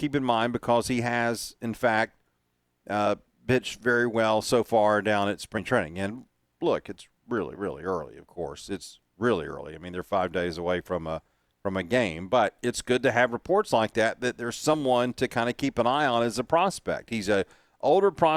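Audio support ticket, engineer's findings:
Compressed frames skipped at 5.57 s after "so far down at", 7.55 s before "really early of course", and 14.73–14.75 s before "to kind of keep". Each jump loses about one 20 ms frame, likely decoder rejecting damaged frames.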